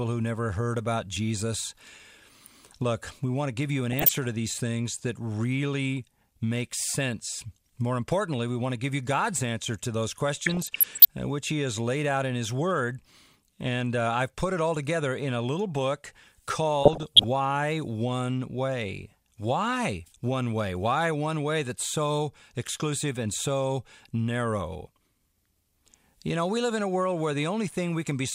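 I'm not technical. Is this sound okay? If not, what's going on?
No. DAB burbling, short blips of noise, occurs at 3.92–4.17 s after "to give you an", 10.39–11.05 s after "answer to those", and 16.83–17.24 s. Weak digital radio reception corrupted parts of the audio data.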